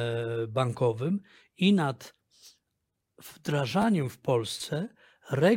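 A short stutter in this speech clip, between 3.82 and 3.84 s, comes across as a click or brief buzz rather than an audible echo. It is a repeated buffer: new audio did not reach the device in time, so it replayed the last block twice more, with a hard join at each restart. The repeats recur every 10 ms, which fits a 10 ms buffer, and little or no audio appears to be lost.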